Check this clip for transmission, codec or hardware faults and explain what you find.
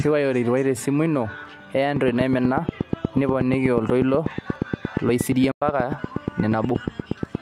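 Two faults are audible in this speech clip: a long run of ticking and one short dropout in the middle of it.

From 1.96 s almost to the end, at 7.36 s, there's a train of clicks, about fifty of them at a steady 8.4 per second. Each has much the same sharp shape and sits well above the speech, around 15 dB hotter, so they tick through the talking and the pauses alike. That regular, identical pulse is most likely interference from nearby equipment or a struggling interface injecting the same spike over and over.

At 5.51 s there's a digital broadcast dropout. The sound fades to silence over about 8 ms and stays gone until 5.62 s. That's roughly 96 ms missing, which fits three lost frames. The receiver lost the signal or got frames that failed their checks, so it muted until clean data came back. Whatever was sent in that gap is simply gone rather than concealed.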